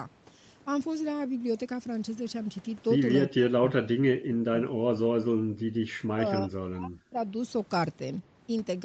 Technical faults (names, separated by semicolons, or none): speech suppressed in double talk